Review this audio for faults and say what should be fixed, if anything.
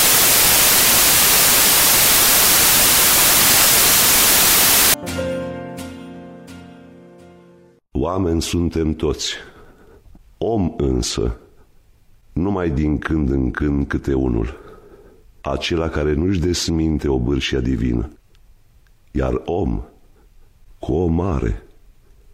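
From 0 to 4.94 s the samples are built from the wrong bytes: each value is assembled with an offset, swapped or misaligned byte order, so the rapidly changing low bits dominate and the sound becomes loud, harsh broadband noise. On a spectrogram this shows as broadband energy, and the waveform looks like a dense block. Prevent it by declaring and checking byte order, sample width and alignment explicitly when reading raw audio.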